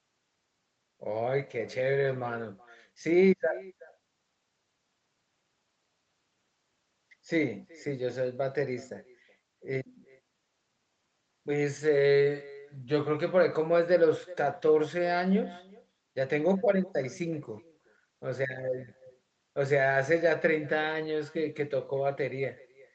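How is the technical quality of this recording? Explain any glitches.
The main problem is echo with no canceller, running through the whole clip. The far end's loudspeaker feeds back into their microphone and nothing strips it out, so each phrase returns about 0.4 s later, about 22 dB down, as a faint, thin shadow trailing the talker. The high end stops at 8 kHz, which is just the normal call microphone processing.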